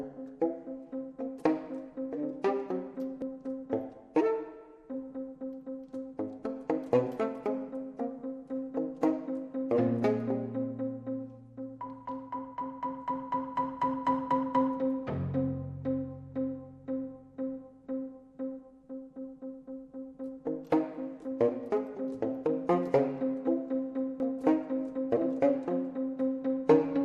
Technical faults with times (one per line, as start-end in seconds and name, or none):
0.00-27.04 MP2 compression
3.22 dropped buffer (overrun)
24.20 dropped buffer (overrun)